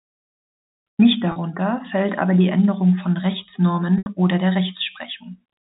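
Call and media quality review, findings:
Packet loss with pitch repetition at 1.32–1.36 s (40 ms gap) and 3.98–4.06 s (80 ms gap). Receiver-side concealment in the jitter buffer or decoder, with losses that fit two and four 20 ms packets. The last pitch period loops to cover the hole: a brief buzzy, held tone at 1.32 s, then a longer hold that fades toward silence at 3.98 s before a cross-fade back. The looped periodic buzz separates it from a plain dropout's silent gap. Band limit of the G.711 path sounds normal around both events.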